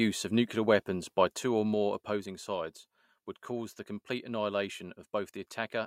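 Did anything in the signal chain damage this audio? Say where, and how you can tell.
Yes. A gain stage in the processing chain lowered the level in unsmoothed jumps rather than a continuous ramp, causing zipper noise from 1.04 to 2.48 s. The speech drops by about 10 dB in steps of about 3 dB, at about two steps a second, and each jump puts a small click into the waveform. The result is a ticking that rides on the speech while the fade runs.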